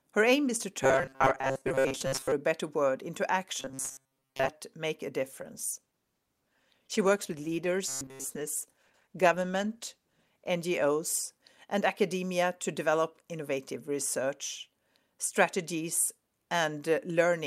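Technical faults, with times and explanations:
0.83–2.32 s, 3.60–4.49 s and 7.88–8.24 s: robotic sound from repeated short buffers, the first two from after "aim is to" until "make a". The sound becomes a rigid metallic buzz locked at 134 Hz, with most of the real audio skipped. This points to a roughly 7.5 ms buffer being replayed, likely because new audio arrived too seldom.
5.21–10.55 s: call bitrate drop after "make a". The bitrate falls from 64 to 16 kbps, so the sound turns coarse, watery or muffled.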